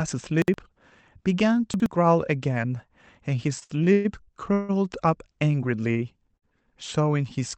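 It's a speech clip that came through a call path (the top end stops around 8 kHz, which fits a wideband call codec), and it has three kinds of timing trouble. First, chunks out of order at 0.42 to 0.54 s and again at 1.74 to 1.86 s. In each case a 60 ms chunk landed one slot late and played after the chunk that should have followed it. Nothing goes missing, but the swap leaves three hard joins each time, so you get a quick jumbled blip. Second, repeated stalls (a stutter) run from 3.59 to 4.71 s. Packets kept showing up late, so the jitter buffer drained six times over that stretch. Each time the receiver kept the last sound going until data arrived, filling 428 ms in all, about 38 percent of that span, with the longest gap at 154 ms faded out. No audio is actually lost, but the speech drags and stammers through there. Third, there are two short stalls from a late packet, at 5.92 to 5.98 s and 6.38 to 6.44 s. 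A single packet wasn't ready when it was due, so the last sound got stretched by 35 ms and then 48 ms before playback picked up from the same spot. You hear a syllable held slightly too long with a faint buzzy or dipping quality.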